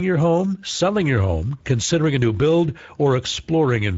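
A short speech clip with Speex codec damage running the whole way through, and it's plainly audible. The speech has that hoarse, noisy CELP grain you get when the codec hasn't got many bits left to describe the excitation, which fits a wideband mode at roughly 17 kbps. There's nothing above 7.7 kHz, so the top end just stops, and the fizz near that ceiling sounds like shaped noise fill rather than real detail.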